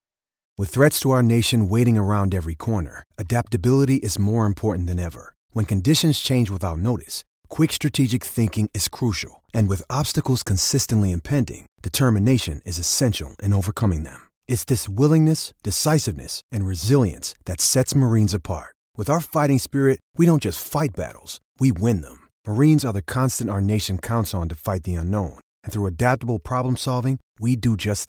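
No technical faults can be heard anywhere in the speech recording, and the signal stays steady and intact throughout.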